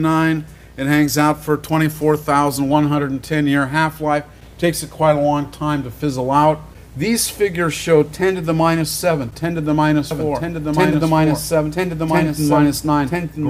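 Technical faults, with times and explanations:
10.11 s to the end, doubled audio track: from here a second full-band copy of the sound runs about a second behind the original, sitting a few dB quieter, around 5 dB down. It cuts in abruptly with no fade, and it's dry, with no decay or room colour. That's what separates it from a real echo. The likely cause is a second, slower capture path feeding the same mix, so everything gets heard twice.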